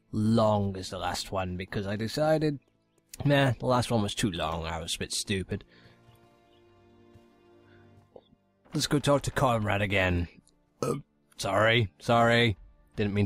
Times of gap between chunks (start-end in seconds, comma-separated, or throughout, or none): none